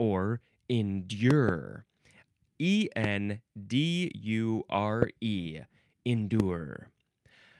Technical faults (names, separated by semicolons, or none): loud pop